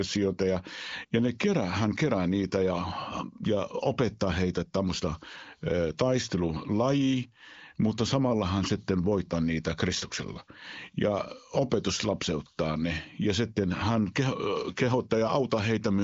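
No technical faults can be heard at any point in the speech.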